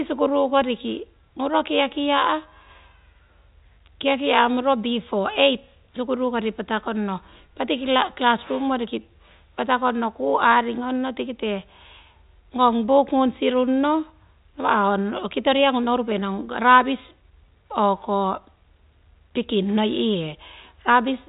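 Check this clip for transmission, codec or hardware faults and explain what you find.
I find no transmission, codec or hardware faults in this speech clip.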